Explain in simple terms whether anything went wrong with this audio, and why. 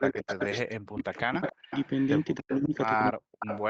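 Both sides of the call were most likely talking at once, and the echo canceller couldn't tell this talker apart from the loudspeaker's echo, so it turned everything down. That is speech suppressed in double talk: the voice drops sharply or cuts out from 0.0 to 1.73 s, 2.4 to 2.74 s and 3.12 to 3.5 s.

The other end was playing the call on a loudspeaker, and its echo canceller likely failed to remove everything its microphone picked up. This is an echo leak: a fainter copy of the voice returns about 0.3 seconds late, around 0.13 to 0.58 s, 1.16 to 2.58 s and 3.39 to 3.61 s.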